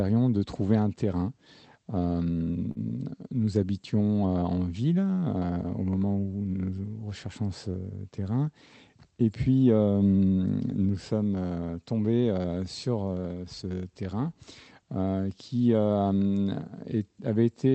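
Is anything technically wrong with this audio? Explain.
Yes, there is a short stall from a late packet at 2.71–2.79 s. A packet arrived late, the jitter buffer emptied, and the receiver stretched the last sound for about 41 ms before resuming where it left off. Unlike a lost packet, no audio is dropped; the sound is only held too long, with a slight buzz or dip.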